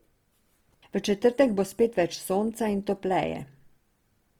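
Across the whole speech clip, the sound is grainy and rough, with a fizzy, noise-like texture where fine tonal detail should be, and the damage is plainly audible. The bandwidth stays wide, reaching about 20.2 kHz. The likely cause is Opus compression in its music (CELT) mode at a rate that fits roughly 24 kbps. Short of bits, the encoder preserves each band's energy but refills missing detail with copied or noise content, turning tone into grit.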